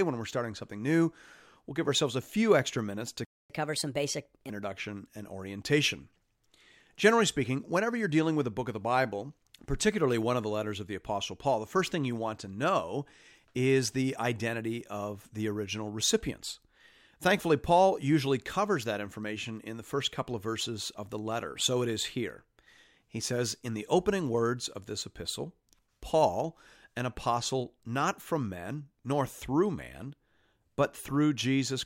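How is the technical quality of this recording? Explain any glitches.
Two linked playback glitches occur early on, right after "few extra minutes to".

Playback stall: from 3.25 to 3.50 s the speech stops dead for about 250 ms, likely because the player ran short of buffered data or its thread was held up. The waveform shows a flat gap, and the spectrogram a blank vertical strip.

Catch-up at higher speed: from 3.50 to 4.50 s the player works off its backlog by resampling at 1.25 times speed, so the voice sounds hurried and raised by about four semitones. On a spectrogram the harmonics sit higher and more widely spaced until they drop back to normal.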